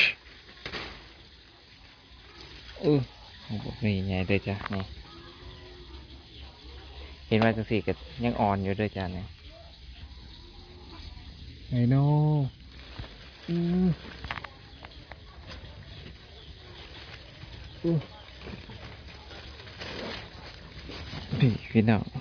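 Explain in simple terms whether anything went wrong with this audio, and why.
Nothing went wrong here: no dropouts, glitches, distortion or other technical faults are audible anywhere in the recording.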